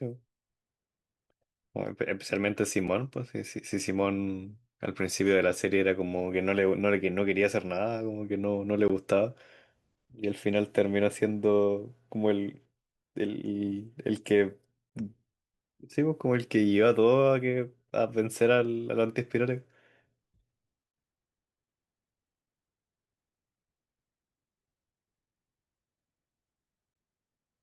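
Gaps between stream segments appear at 2.87, 8.88, 14.90 to 14.92, 20.92 and 26.94 s, spaced about 6 s apart at each segment boundary. Each time, the timestamps of consecutive segments fail to meet, and the player fills the shortfall with silence. The speech drops out abruptly for about 6, 17, 24, 18 and 17 ms, with hard edges on both sides, then resumes where it left off, since nothing is actually lost.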